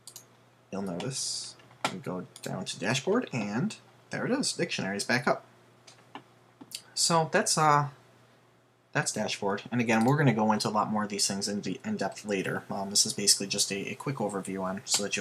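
From 12.39 s to the end, the sound turns thin, bright and sibilant: pre-emphasis left on, a CD 50/15 µs treble boost never de-emphasised, about 8 dB up at 10 kHz.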